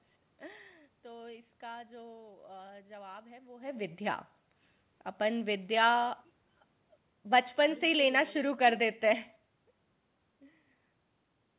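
No technical fault can be heard anywhere in the recording. The speech carries the narrow telephone-band sound of a call path, with nothing above 4 kHz, which fits G.711 mu-law coding at 64 kbps.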